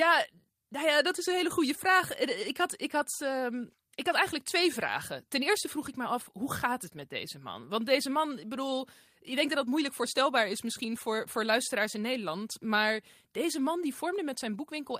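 No technical faults can be heard anywhere in the recording.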